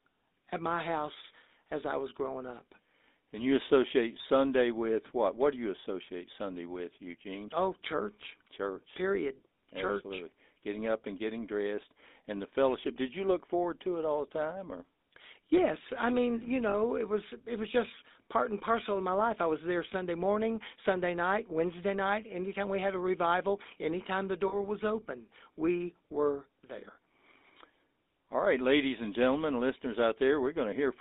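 Throughout, the speech carries the buzzy, gravelly roughness of the GSM full-rate codec, which suggests a 13 kbps coder. It models the vocal tract and excites it with sparse, regularly spaced pulses, and the band sits between about 250 Hz and 3.7 kHz. The damage is plainly audible.

At 16.7 s and again at 24.48 s, lost GSM frames break the flow. For roughly 40 ms each time, the decoder repeats the last good frame, leaving a brief rough, metallic ring where the signal should continue.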